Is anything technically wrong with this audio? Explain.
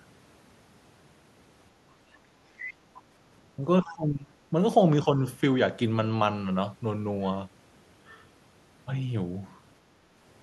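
Yes, there are two echo-canceller problems here. From 1.82 to 2.45 s, 3.57 to 3.65 s, 3.86 to 4.43 s and 5.04 to 5.2 s you get speech suppressed in double talk. The voice drops out, by around 35 dB at its worst, with only slight dips in the short bits. The likely cause is the canceller mistaking the talker for loudspeaker echo and ducking everything.

There's also the other side's voice leaking through at 2.57 to 2.74 s and 3.84 to 3.95 s. These are brief, faint scraps sitting roughly 15 to 20 dB below the main speech. They're most likely loudspeaker playback that the canceller didn't fully strip from the mic.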